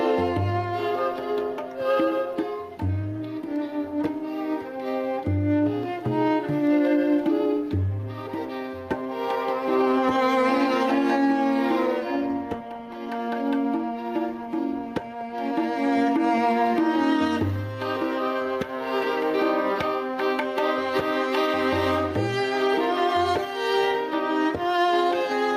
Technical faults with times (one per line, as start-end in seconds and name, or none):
0.00-25.56 gain pumping